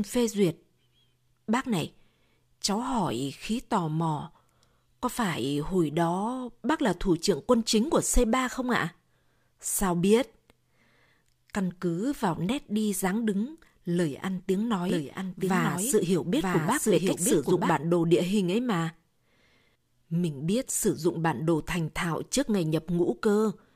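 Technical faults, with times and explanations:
14.9–17.7 s, doubled audio track: after "đứng lời ăn tiếng" and ending before "bản đồ địa hình", a second full-band copy of the speech runs about a second behind the original and a few decibels quieter. It is likely the same audio captured again through a slower path. Unlike an echo or reverb, the copy has no decay or room colour, and it starts and stops abruptly.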